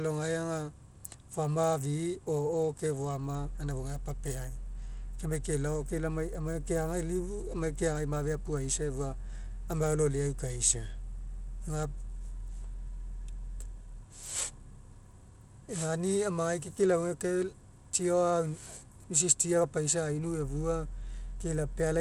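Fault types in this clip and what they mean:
Bluetooth SBC compression: the speech carries a plainly audible grainy, gritty coating throughout, with content reaching up to about 20.8 kHz. This likely comes from SBC coding, which splits sound into wide bands and quantises them coarsely, consistent with roughly 96 kbps.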